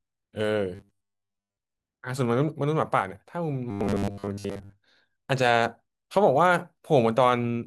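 From 0.75 to 1.57 s and again from 3.71 to 4.77 s, the speech turns into a rigid metallic buzz at 100 Hz. This is robotic sound from repeated short buffers. Audio likely arrived too seldom, so a 10 ms slice was looped over most of that time.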